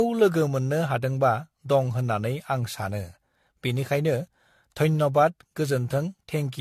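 Throughout the speech there is generation loss: swirly, hollow, smeared sound with blurred consonant onsets, likely from around seven successive lossy re-encodes, consistent with 64 kbit/s AAC-LC. A spectrogram shows nothing above 14.2 kHz and scattered holes.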